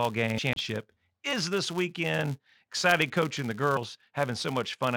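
Running under the whole of this speech clip is a filter restarted on every block: a steady buzz at 172 Hz that rises and falls with the level of the talking. Each time the filter starts a block from silence it throws a small transient, and those ticks land at a regular rate that fits a 256-sample block, so they fuse into a pitched buzz rather than separate clicks. On top of that there are compressed frames skipped at 0.37 s, 1.32 s and 3.76 s. Each one is a short blip where the audio suddenly jumps ahead, by around 150 ms at 0.37 s and 3.76 s and by a shorter stretch of roughly 50 ms at 1.32 s. Those jumps fit whole 23.2 ms frames going missing or being thrown out by the decoder. Finally, there's a CD skip from 0.53 to 0.56 s, right after the first of those frame jumps. You hear a brief mute of about 30 ms, then playback carries on from a different spot. That's the laser hopping to another turn of the disc's spiral after a knock or a flaw on the surface, so the sound picks up somewhere other than where it left off.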